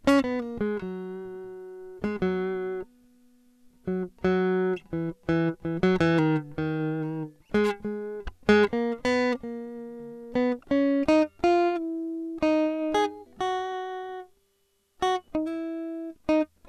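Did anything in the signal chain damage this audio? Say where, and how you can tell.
No, the signal chain left no audible damage here.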